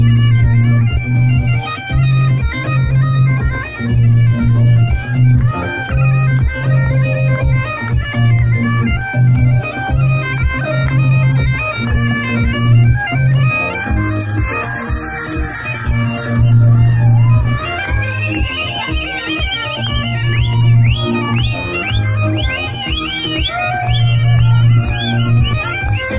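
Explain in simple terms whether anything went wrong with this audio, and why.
Listening through this audio, nothing stood out as having gone wrong.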